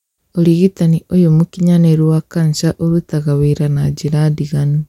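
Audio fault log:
3.76 s, corrupt FLAC frame: a short disturbance peaking at about -18 dBFS, just after "mũkinyanĩrũwa kanja ũrutaga wĩra". Flipped bits sent the decoder's prediction off on wrong values, and the clean recovery right after points to damage within a single frame.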